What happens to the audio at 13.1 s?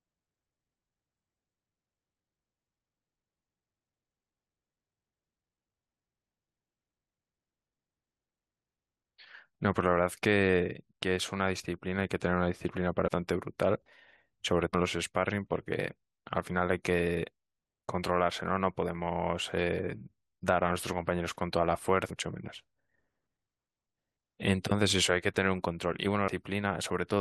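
Damaged data in the compressed stream from 13.06 to 13.09 s makes the decoder misread frames and lose sync, producing a brief chirp, squawk, click or short hole.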